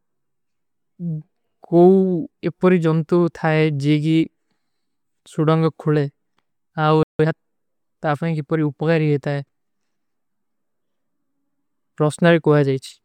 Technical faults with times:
7.03-7.19 playback stall
7.19-7.35 time-compressed catch-up

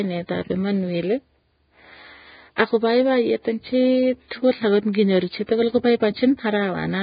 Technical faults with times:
0.00-7.03 Vorbis compression

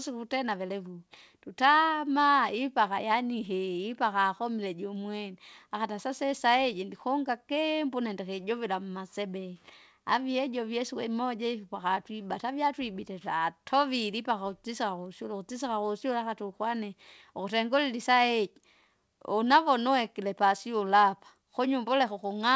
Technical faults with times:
none

